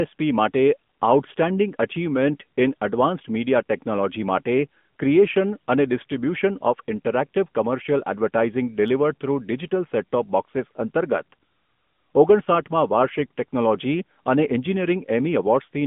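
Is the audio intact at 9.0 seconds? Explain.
No. From 8.88 to 9.45 s, between "કમર્શિયલ એડવર્ટાઈઝીંગ" and "ડીજિટલ સેટ ટોપ બોક્સીઝ", there are CD scratch ticks: four sharp clicks, each under a millisecond. They come from damaged data the player could not fully correct. On the waveform they appear as narrow glitches, and on a spectrogram as thin vertical lines.

The AMR narrowband mobile codec also affects this moment. The sound is buzzy and synthetic, consistent with a roughly 10.2 kbps mode. On the spectrogram it shows as a hard ceiling with nothing above 3.6 kHz.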